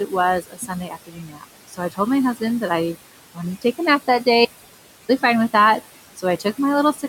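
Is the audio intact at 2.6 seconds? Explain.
No. At 2.6 seconds, as throughout the speech, noise suppressor artifacts are present: the suppressor cuts the bands it judges to be steady noise by about 17 dB frame by frame, so the room noise, about 16 dB below the speech, pumps, sinking between the words and rising under them.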